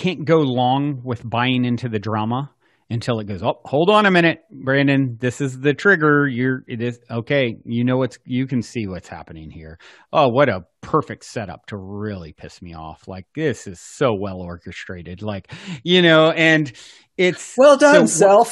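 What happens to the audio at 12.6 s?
Nothing goes wrong at 12.6 s; the speech carries on intact through that moment, with no dropout, click or other fault.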